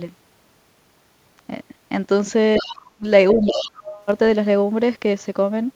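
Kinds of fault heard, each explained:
other side's voice leaking through: A fainter second voice breaks in from 2.57 to 2.75 s and again from 3.32 to 3.71 s. It sits about 20 dB below the talker at first, then about 10 dB below. This is likely loudspeaker echo that the echo canceller missed.
speech suppressed in double talk: The talker's voice sinks sharply from 2.59 to 3.06 s and from 3.33 to 3.99 s, overlapping the leaked voice. The first dip reaches about 40 dB, the second about 30 dB. The likely cause is the echo canceller turning down both voices during overlap.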